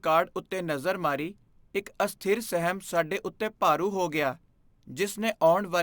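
Speech with crude rate conversion throughout the recording. A gritty, inharmonic fizz rides along with the voice, strongest on loud and bright sounds, sitting roughly 25 dB below the speech. The pattern fits a step up from 32 kHz to 48 kHz done by repeating the nearest sample rather than filtering. On a spectrogram, mirrored copies of the speech harmonics appear that do not follow the voice's pitch, some above 16 kHz. Zoomed in, the waveform shows a regular staircase of duplicated samples.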